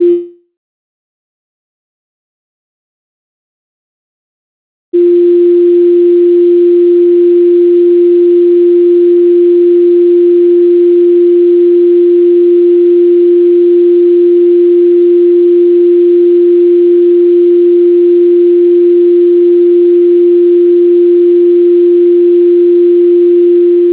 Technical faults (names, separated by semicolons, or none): long network dropout